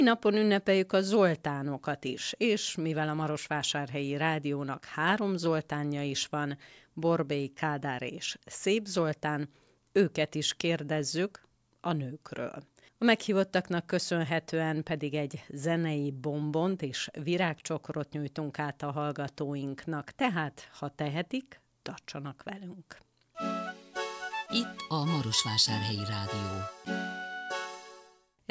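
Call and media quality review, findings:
No faults found in this call and media quality review.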